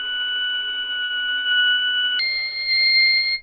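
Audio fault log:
1.04–2.05 s, repeated packet loss (robotic sound): seven dropouts, the longest 56 ms, are each filled by extending the preceding sound, leaving a choppy texture.
2.19–3.42 s, section at the wrong speed: runs 1.43 times fast, so the sound is hurried and about seven semitones higher, likely from playback against the wrong clock.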